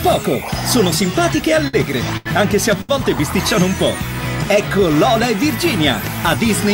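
The audio has three short stalls from late packets, at 1.67 to 1.75 s, 2.17 to 2.27 s and 2.81 to 2.91 s. Each time, a packet arrived late and the jitter buffer ran dry. The receiver held the last sound for 59, 81 and 74 ms, giving a brief frozen, slightly buzzy stretch. Playback then resumed where it stopped. Nothing is lost, but each stall pushes everything after it later by the same amount.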